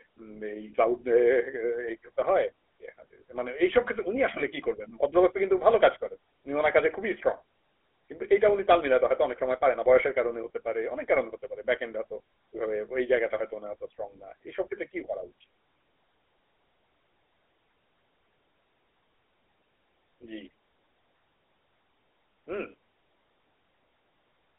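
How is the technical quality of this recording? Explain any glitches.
The technical quality is poor throughout: the speech carries plainly audible GSM full-rate codec damage from start to finish. The codec rebuilds the voice from a vocal-tract model excited by sparse regular pulses, consistent with a 13 kbps GSM stream, giving a buzzy, gravelly roughness. A spectrogram shows a hard ceiling with nothing above 3.8 kHz and little energy outside roughly 300 Hz to 3.5 kHz.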